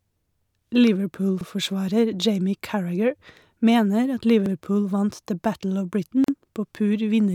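At 1.41 s and 4.46 s, overlapping chunks: each 3-second chunk starts 50 ms early, so 50 ms of speech repeats as a brief stutter. At 6.24 s, a gap at a join of encoded pieces: untrimmed encoder padding leaves a 40 ms gap with smeared edges before speech resumes where it stopped.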